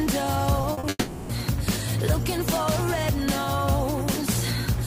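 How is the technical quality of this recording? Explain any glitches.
The recording has transmission glitches, all packed between 0.6 and 1.3 s.

Short concealed packet loss causes brief smears at 0.61–0.65 s, 0.73–0.79 s and 0.79–0.85 s. The receiver patched 20 to 40 ms gaps by extending the preceding sound.

From 0.89 to 1.31 s, the sound becomes a fading continuation ending in brief silence. This is likely a long network dropout, with about 0.4 s of audio lost.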